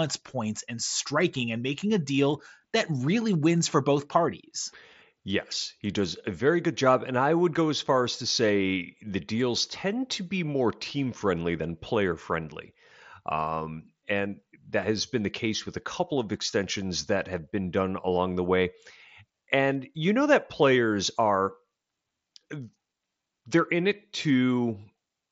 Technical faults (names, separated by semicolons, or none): none